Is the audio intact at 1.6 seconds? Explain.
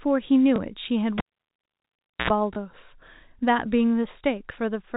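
No. At 1.6 seconds the audio sits inside a cable pulled and plugged in event running from 1.18 to 2.30 s. A pop opens a gap of about 1.07 s of near silence. Just before the sound returns, a brief 60 Hz mains buzz of about 82 ms is heard as the plug tip touches, then a second pop.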